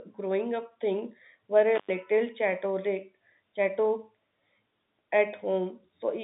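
A brief dropout with crackle at its edges breaks this telephone-band speech between 1.75 and 1.90 s, the signal vanishing for about 0.11 s into faint hiss. It's an intermittent contact, a loose plug or cable momentarily opening the line.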